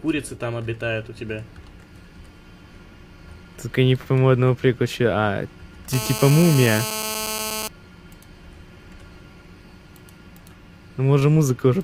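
A nearby 2G handset on a call, its 217 Hz transmit bursts rectified by the audio circuit, causes GSM phone buzz: a steady, raspy, harmonic-rich buzz about 8 dB below the audio from 5.93 to 7.68 s.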